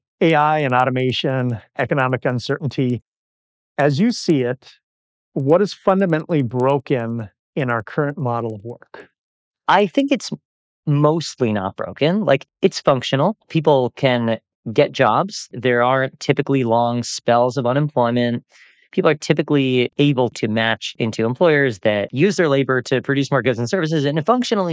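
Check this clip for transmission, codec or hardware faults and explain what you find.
One fault is present. From 0.0 to 10.1 s, the resampler restarted on every block. Each 100 ms block was converted alone, leaving errors at its edges. Regular ticks sound at 10 Hz.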